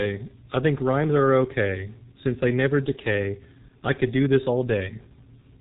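From the start the speech carries the sound of the G.723.1 codec, and the damage is heavy. The low rate, which points to the 6.3 kbit/s mode, leaves the voice muffled and hoarse. The codec models speech in coarse 30 ms frames and updates that model slowly, so consonants smear. On a spectrogram, energy stops abruptly near 4 kHz with an empty band above, and fricatives show as blurred smudges rather than crisp bursts.

From 3.68 to 3.74 s, VoIP packet loss is concealed by the speech codec. The 30 ms gap fits a single lost frame. The decoder filled it by repeating its last pitch and filter settings at falling gain, giving a brief stretched sound that fades. Recovery lags because each frame builds on the previous one. The waveform shows a short run of near-identical periodic cycles shrinking in amplitude. On the spectrogram, the harmonics go flat and steady, then dim.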